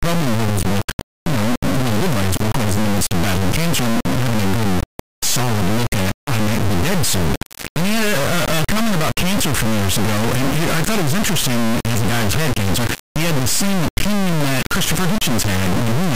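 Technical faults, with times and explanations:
Throughout: integer read as float. The speech was stored as 32-bit integers but decoded as 32-bit floats, so each sample's bit pattern becomes a tiny value, an invalid one, or one far past full scale. The output slams between silence and the clipping rails, heard as an extremely loud, harsh square-wave buzz that drops out in quiet stretches. The waveform looks like a solid square-wave block with gaps, and the spectrogram shows dense broadband energy up to the top.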